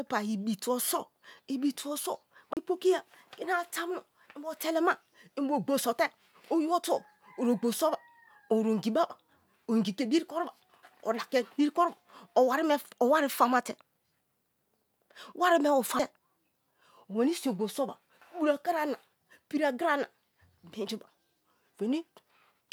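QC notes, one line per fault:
2.53–2.57 s, CD skip: a tick and a brief dropout of about 30 ms just before "pokiya kini". A knock or a flaw made the laser jump to another turn of the disc spiral, so the player muted and resumed from a different point, and the audio continues out of place.
15.99 s, CD skip: just after "wari me", a tick with only a few milliseconds of mute, then the audio resumes from another point on the spiral.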